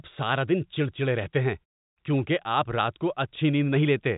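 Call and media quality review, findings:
Nothing to flag here: the speech sits in a normal telephone band topping out around 3.8 kHz, and the quiet gaps between phrases drop away and come back in time, with only very quiet sound lost.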